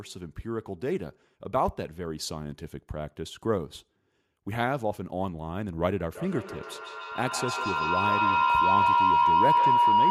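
From 6.14 s to the end, a tone near 1 kHz swells about 7 dB above the speech, with repeats roughly every 150 ms: feedback howl from a mic-to-loudspeaker loop gaining level each pass.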